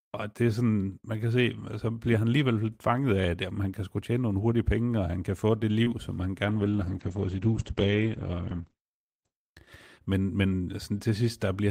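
At 5.84 to 5.88 s there is a short concealed packet loss. About 20 ms of the speech arrived too late for the decoder, and the receiver covered the gap with roughly 17 ms of synthesised continuation, extending the preceding sound before crossfading back into the real signal. The result is a brief smear in the speech, a wobble at the join rather than an outright dropout.

From 6.48 to 9.59 s a call bitrate drop is audible. The bandwidth estimate fell and the encoder went from 32 kbps to 11 kbps, staying at the lowest rate for about 3.04 s. At that rate Opus codes more coarsely and narrows the audio bandwidth from 20 kHz to 8 kHz, so the speech loses its high-frequency detail and turns muffled and watery until the bitrate recovers.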